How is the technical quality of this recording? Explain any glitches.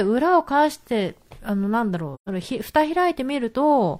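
The recording has one glitch, a short dropout in the speech. From 2.14 to 2.28 s there is AAC frame loss with muting. About 128 ms of coded audio went missing, which fits three lost frames. The decoder filled that span with silence. Its overlapping windows fade the sound out and back in, so it is a soft-edged gap rather than a hard cut.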